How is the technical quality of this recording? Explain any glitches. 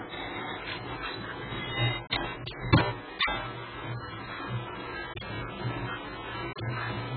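Technical quality is poor throughout. AAC compression, likely at a very low bitrate near 9 kbps, removes everything above 4.7 kHz and leaves a warbling, smeared texture. Unlike a plain low-pass filter, it also adds that fizz.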